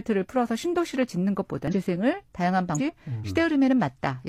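Speech with two brief bursts of damaged data in a compressed stream, at 1.68 to 1.74 s and 2.74 to 2.80 s, each about 60 ms long. Corrupted bytes make the decoder misread frames and lose sync until the next frame header, producing a short glitch.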